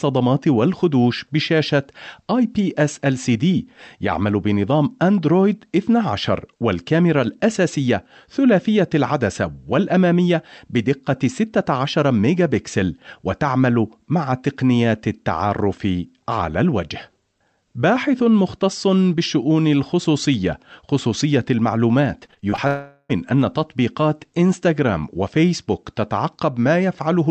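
Speech, sent over an Opus call path whose energy stops near 8 kHz. Between 22.25 and 22.59 s, repeated packet loss (robotic sound) chops the sound with six short concealed gaps, each no longer than 19 ms and together about 29% of that stretch. On a spectrogram this appears as smeared, repeated vertical slices. From 22.67 to 23.11 s the sound becomes a continuous buzzy extension of the last sound for about 0.42 s, never dropping to silence. This is likely a long network dropout. The waveform shows a smooth, repetitive stretch, and the spectrogram shows flat, stretched-out bands.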